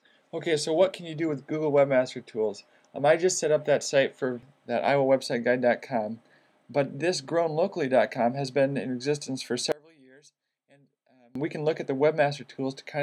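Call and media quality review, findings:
9.72 to 11.35 s: sound nearly drops out, about 30 dB down, leaving a faint residue, then snaps back. Likely one channel inverted somewhere in the stereo chain. Reversed polarity on one side means the shared centre content cancels on mono summing. Only the small left-right difference survives. Worth checking the mixdown or routing stage for that window.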